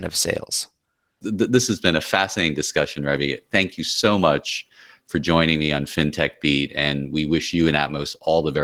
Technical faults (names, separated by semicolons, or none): Opus voice compression